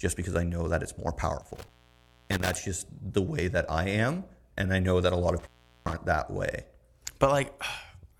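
An intermittent contact, a loose connection briefly opening, drops the speech after "know that it's more" (1.41–2.57 s, gap about 0.6 s) and after "know that a lot" (5.39–5.94 s, about 0.39 s), before "that way". The waveform collapses to near-flat, with crackle spikes showing as vertical spectrogram streaks at each edge.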